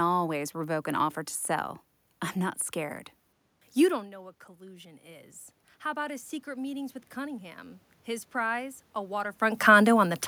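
Speech with one problem: automatic gain rising from 3.95 s to 9.46 s. The talker drifts back around 4 s, dropping the input about 18 dB, so the AGC creeps its gain up about 10 dB, swelling voice and room noise together until the talker moves again near 9.5 s.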